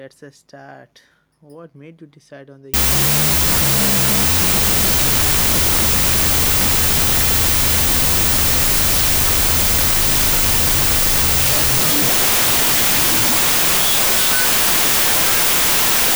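From 2.74 s to the end, a wrong sample width turns the speech into loud noise at half speed and lower pitch. Float samples are read as 16-bit integers, so mismatched bytes bury the original, unlike plain clipping or a slowed file.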